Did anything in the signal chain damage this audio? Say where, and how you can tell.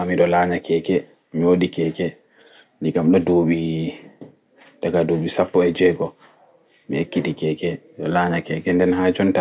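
No, nothing in the signal chain damaged this speech recording. No stage from capture through playback has left a mark that can be heard.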